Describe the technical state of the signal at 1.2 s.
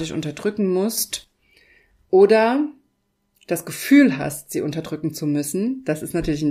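At 1.2 s the signal sits inside a sudden gain jump running from 0.98 to 1.24 s. The likely cause is a digital gain setting applied instantly rather than ramped, so the level changed between two adjacent samples. The speech and its background noise rise together by about 7 dB at 0.98 s, hold at that raised level through 1.2 s, and drop back at 1.24 s, giving an abrupt, unnatural step in loudness.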